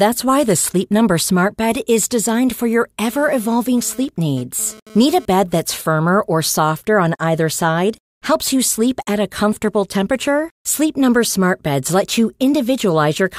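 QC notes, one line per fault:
2.28 to 5.26 s, GSM phone buzz: a harsh, raspy 217 Hz buzz with dense harmonics sits about 24 dB below the speech, then stops, fitting a nearby 2G phone's data bursts being rectified by the audio circuitry. Unlike smooth 50/60 Hz mains hum, it rasps.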